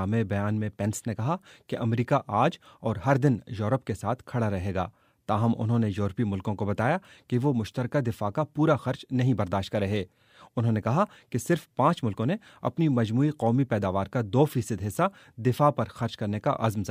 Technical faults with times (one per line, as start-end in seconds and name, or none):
none